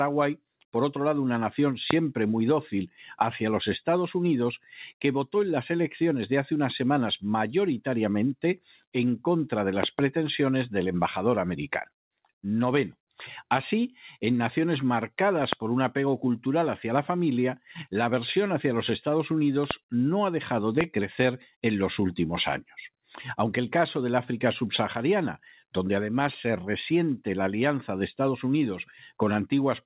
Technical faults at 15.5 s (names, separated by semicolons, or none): loud pop